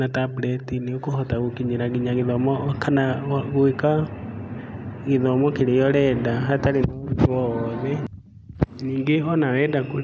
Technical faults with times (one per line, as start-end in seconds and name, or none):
0.27-1.54 background gated by the echo canceller
0.58-0.63 echo leak
2.34-2.51 background gated by the echo canceller
3.16-5.47 background gated by the echo canceller
6.87-8.59 background gated by the echo canceller
9.87-10.02 background gated by the echo canceller